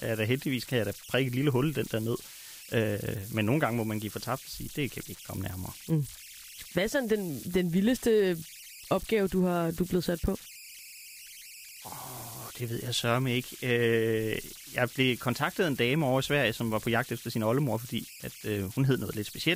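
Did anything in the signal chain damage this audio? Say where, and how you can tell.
Yes. The damage sits at the converter stage and runs through the whole speech clip: converter idle tones. In the pauses a whistle around 3 kHz hangs in the background, and quiet passages sit on a grainy bed of noise, about 18 dB below the speech. An undithered delta-sigma modulator fed a near-silent input settles into repeating bit patterns that emit tones. On a spectrogram they appear as thin horizontal lines near 3 kHz in the gaps. The waveform shows a low, busy floor instead of flat silence.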